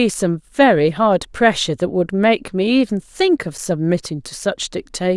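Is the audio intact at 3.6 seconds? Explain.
No. At 3.58 s there is a block of digital silence about 5 ms long. That fits a 128-sample buffer the program did not fill in time. The speech drops straight to silence and back with no fade, which is heard as a brief tick.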